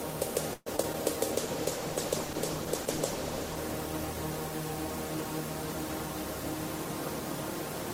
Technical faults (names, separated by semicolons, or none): repeated packet loss (robotic sound); call bitrate drop